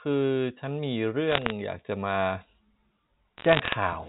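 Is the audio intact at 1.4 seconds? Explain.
No. From 1.3 to 1.52 s the speech carries bit errors on a digital phone line: on the G.711 mu-law link, a fraction of a percent of bits flip, and each flip corrupts one 8-bit sample. Hits on the high-order bits, or on the sign of a loud sample, throw that sample far off, producing sharp ticks that add up to a crackle over the unchanged speech. On a waveform these appear as isolated single-sample spikes; on a spectrogram, as thin vertical lines spanning the band up to 4 kHz.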